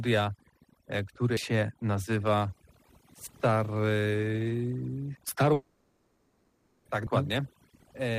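Overdone noise removal runs through the whole clip. The background sits near silence with twinkling specks.

At 1.37, 3.27, 5.17 and 7.07 s the audio skips, losing roughly a tenth of a second each time. This is likely audio missing between chunks, spaced about 2 s apart.

From 5.53 to 6.88 s a long network dropout likely occurred. About 1.3 s of the original is gone, filled throughout by a continued buzz or hiss rather than silence.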